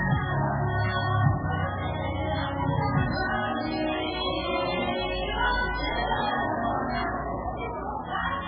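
From start to end, the sound is heavily damaged by what is likely MP3 compression. Nothing comes through above 5.1 kHz, so the top end is simply gone. The damage points to a very low bitrate, around 8 kbps. With so few bits, the encoder drops weak frequency lines and lets them flicker on and off between frames. That gives a watery, swirling texture. Sharp onsets blur and lose their edge.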